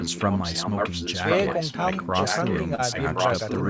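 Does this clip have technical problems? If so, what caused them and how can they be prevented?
Yes. From 0.0 to 2.6 s and again from 2.91 s to the end, a copy of the speech returns about 1.07 s late, first a little below the speech, then about as loud. This is an echo leak, likely from a far-end loudspeaker whose echo canceller let the pickup through. Prevent it with headsets or a properly tuned echo canceller.

At 2.75 to 2.81 s, short concealed packet loss leaves a brief smear: about 30 ms of audio never arrived and was filled by extending the preceding sound. Prevent it with a steadier network path or forward error correction.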